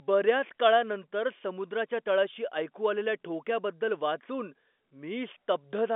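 Nothing stood out on listening to this speech, which comes across with the narrow band of an ordinary G.711 telephone line.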